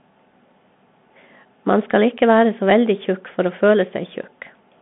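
The speech has passed through a Bluetooth CVSD headset codec for its whole length, a narrowband link that codes the signal as a single up-or-down bit per step with an adapting step size, which fits a 64 kbps stream. The result is telephone-band sound confined to roughly 150 Hz to 3.5 kHz, with no low body or upper air. The codec damage is plainly audible: sibilants come through scratchy, and a granular hiss sits beneath the speech.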